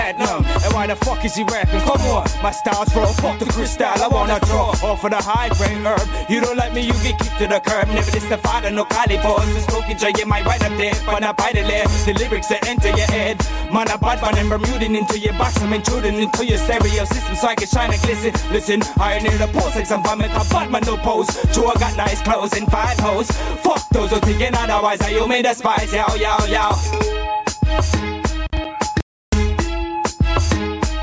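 Throughout the clip, the level swings by around 10 dB, squashing the sound. This is gain pumping, likely a fast limiter working against excessive input gain. From 29.01 to 29.33 s the audio drops out to silence for 320 ms with no room tone, likely from the input being briefly lost. The call microphone processing shows nothing above 8 kHz.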